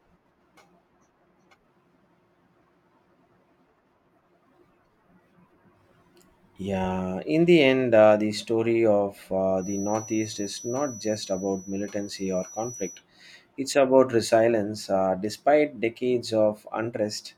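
A speech recording carries a feedback whistle from 9.55 to 13.03 s. A thin, steady tone sits at 5.9 kHz, well below the level of the speech. It swells and fades slowly in loudness but never builds into a howl. The likely cause is a loudspeaker-to-microphone loop held just at the edge of feedback. At that point one high frequency keeps ringing without running away.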